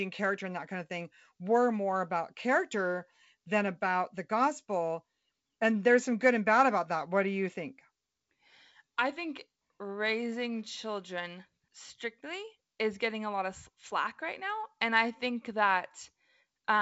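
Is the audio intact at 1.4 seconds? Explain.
Yes, the audio is intact at 1.4 seconds, with no fault affecting the speech at that moment.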